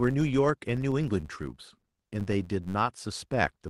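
Filter restarted on every block runs through the whole speech clip: a steady tick-like buzz near 93.8 Hz, rising and falling with the signal level, because a filter starts each block from silence and leaves a small transient at every block boundary, which fits a 512-sample buffer. Repeated stalls (stutter) follow from 1.81 to 2.65 s, where packets arrived late, the jitter buffer kept running dry, and the receiver stretched the last sound through several brief holds, the longest about 18 ms and totalling 71 ms, so the speech drags without losing anything.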